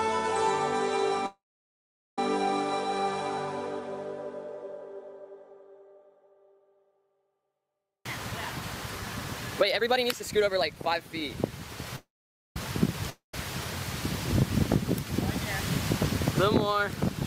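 At 1.26 s the sound stretches into a fading buzz that sinks to silence for most of its length, then resumes at 2.19 s exactly where it stopped; the same happens from 11.96 to 12.57 s. Both are call audio freezes, likely from packets held up in transit until the jitter buffer emptied. The receiver extended the last sound, inserting gaps of about 0.91 s and 0.60 s while losing nothing. From 7.83 to 10.96 s the audio runs hurried at unchanged pitch, about 124% speed. This is a jitter buffer speed-up: the buffer had grown too full, so the receiver cut short pitch-period pieces repeatedly, trimming roughly 0.7 s to bring the delay down. At 13.10 s a brief buzz fades to silence and the sound comes back at 13.34 s with about 0.24 s gone, likely a long network dropout where no packets arrived for that stretch.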